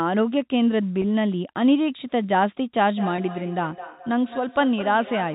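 From 1.02 to 1.04 s the speech briefly holds a slightly buzzy sustained sound: packet loss with pitch repetition, where the receiver repeated the last pitch period to fill a 20 ms gap, which points to two lost packets.

From 2.87 s to the end, each word comes back about every fifth of a second, thinner and ringing, peaking about 14 dB below the speech. This is feedback echo between two devices: one device plays the other's microphone signal, which is picked up again, and neither echo canceller removes it.

The same held, buzzy pitch repetition returns from 3.16 to 3.18 s (20 ms lost) and at 4.81 s (10 ms, pointing to a single packet).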